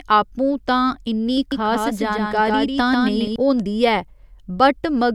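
From 1.52 s to 3.36 s, just after "तां इन्नी", the speech carries a doubled audio track: a second, full-band copy trails the original by about 150 ms, roughly 5 dB quieter, with no reverberant tail. It sounds like a dry, clipped slapback that switches on and off abruptly. The likely cause is the signal being captured again through a slower path. On a spectrogram, each syllable's pattern repeats slightly fainter and shifted right; the waveform shows matching echo envelopes.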